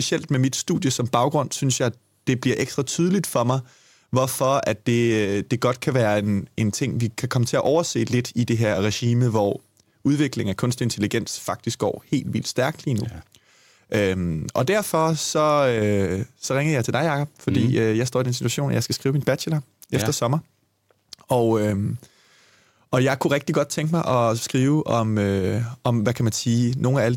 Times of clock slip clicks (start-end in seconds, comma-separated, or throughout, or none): 0.21-27.15